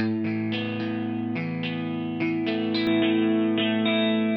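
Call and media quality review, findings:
Dull, boxy from 2.87 s to end, nothing above 3.8 kHz, no gap, a few dB level jump, faint new noise. Likely input switched to a poorer device.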